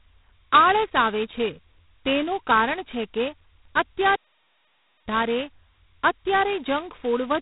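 G.726 ADPCM coding runs through the whole clip: the speech has been squeezed into a few bits per sample of difference from an adaptive prediction. The harsh, rasping hiss that swells and fades with the speech level points to the lowest rate, around 16 kbit/s, or just 2 bits a sample, where the quantisation noise is at its coarsest. The damage is heavy, and nothing above 3.9 kHz survives, leaving a narrow telephone-band sound.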